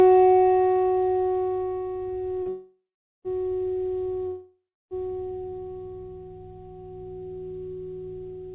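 At 2.43 s a short stall from a late packet holds the sound for about 33 ms while the jitter buffer waits, adding a faint buzz or dip with nothing lost. From 2.49 to 3.28 s a call audio freeze follows: the last sound turns into a fading buzz or hiss, then about 440 ms of silence, and the audio resumes exactly where it left off, now delayed by roughly 0.76 s. The same happens from 4.27 to 4.94 s, with about 310 ms of silence and 643 ms added. Both freezes are likely caused by packets held up in transit. All of this plays through a G.711 A-law call path with nothing above 4 kHz.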